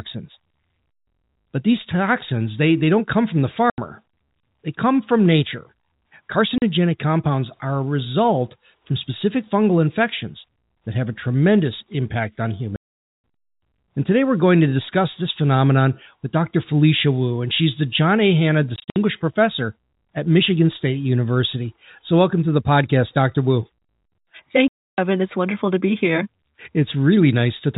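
At 3.70 to 3.78 s, 6.58 to 6.62 s, 12.76 to 13.18 s, 18.76 to 18.96 s and 24.68 to 24.98 s, the speech drops into dead silence: packet loss filled with silence. Every gap is a multiple of 20 ms, which fits 20 ms packets. Around 18.8 s the holes are scattered, with the longest run 60 ms. Unlike concealment, nothing fills the holes, and their hard edges cut into the band-limited G.711 telephone sound.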